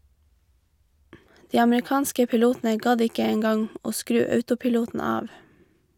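No technical faults can be heard anywhere in the recording.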